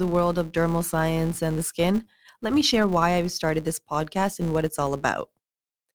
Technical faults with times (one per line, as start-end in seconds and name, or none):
0.00-5.95 filter restarted on every block